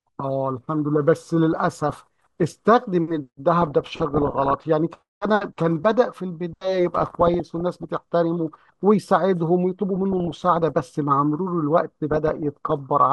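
Five stretches of DAB burbling turn up in the speech, at 1.53–2.43, 3.62–4.61, 6.97–7.92, 9.96–10.81 and 12.11–12.72 s. Weak reception lets bit errors slip past error correction, so wrong samples put short blips of noise into single sub-bands, heard as burbling.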